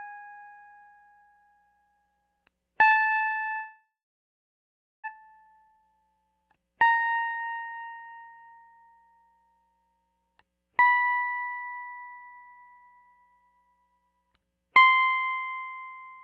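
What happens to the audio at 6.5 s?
At 6.5 s the music is inside a jitter buffer speed-up running from 5.13 to 6.99 s: the receiver had too much audio queued and repeatedly trimmed short pitch-period chunks, about half a second in total, so the music plays at 125% speed without changing pitch and briefly loses its steady tempo.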